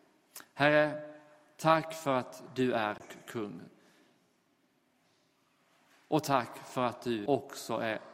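A tick and a brief dropout at 2.98 to 3.00 s, muting for about 20 ms, after which the sound resumes from a different point. At 7.26 s a second, shorter tick mutes for only a few milliseconds before another jump in the playback. Both are CD skips: a knock or disc flaw threw the laser onto another turn of the spiral track, so the player briefly muted and carried on from a displaced position.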